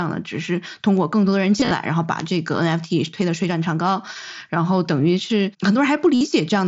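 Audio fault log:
0.97 s, 2.20 s and 5.64 s: bit error spike. Each is a single sharp tick, broadband and unrelated to the speech around it. A flipped bit in one or two consecutive samples throws the value off by a power of two before it snaps back, leaving a click with no tonal character.
1.59 to 1.71 s and 6.15 to 6.21 s: concealed Bluetooth headset packet loss. About 75 ms of audio is missing in short runs scattered over 120 ms, the longest near 22.5 ms, then 60 ms near the end. The receiver patches gaps by repeating recent waveform, giving a brief buzzy, held quality with a slight warble on recovery.
Throughout: the mSBC wideband headset codec, at a rate that fits about 61 kbps, passes speech up to 8 kHz with light graininess on louder passages.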